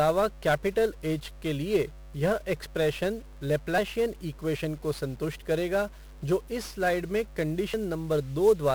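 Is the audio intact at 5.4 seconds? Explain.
No. At 5.4 seconds the speech carries mains hum, as it does for the whole clip. A steady low tone sits under the signal at 50 Hz, roughly 20 dB below it, with a few low harmonics stacked above. This is power-line energy leaking into the signal path, most plausibly through a ground loop or coupling from a nearby transformer. Because it is constant rather than tied to the speech, it is most exposed in the pauses.

The same moment also shows heavy 1-bit DFPWM compression, likewise present from start to finish. Each sample is reduced to a single bit that nudges an adaptive level up or down, so the waveform is only ever approximated in coarse steps. The resulting quantisation noise is dense and broadband: the speech sounds fuzzy and crackly, and its high-frequency detail disappears under hiss. The stream runs at about 48 kbps.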